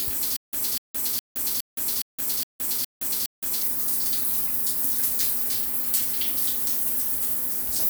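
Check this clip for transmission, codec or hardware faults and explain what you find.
There is one fault, a stutter with silent gaps, from 0.36 s to 3.62 s. A fragment of about 244 ms plays eight times, each followed by about 169 ms of dead silence, repeating every 414 ms. The likely cause is a stalled player or stream that replays its last buffered piece at each retry and then runs dry. The audio for that stretch is lost. On a waveform, identical blocks alternate with flat silent gaps. A spectrogram shows matching columns separated by fully blank strips.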